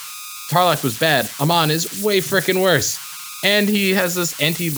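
From start to finish the speech carries converter idle tones. A delta-sigma converter run without dither has settled into repeating bit patterns at low input levels, and these generate a tonal error near 1.5 kHz, sitting at about 12 dB below the signal. In the pauses it comes through as a whistle or chirp, and under the speech it turns into a grainy, buzzy noise floor.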